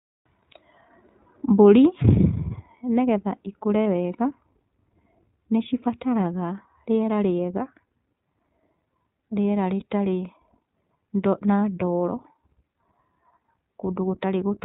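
Throughout the speech the sound is band-limited and slightly rough, with a synthetic edge that is plainly audible and no content above 4 kHz. This is the iLBC codec at 15.2 kbps with 20 ms frames. It codes each frame's excitation on its own rather than predicting from the frame before, and its narrowband design discards everything above 4 kHz. At this rate that leaves the clear but coarse, processed texture heard across the clip.

At 3.86 s, just after "nĩgetha cikũre", and again from 9.80 to 9.84 s, there is a brief held, faintly buzzy vowel-like smear lasting about 20 ms, which fits a single lost frame each time. These are lost iLBC frames. With the packet missing, the decoder repeats the last pitch cycle blended with noise to bridge the gap. Because the next frame decodes without depending on the lost one, normal speech returns almost immediately.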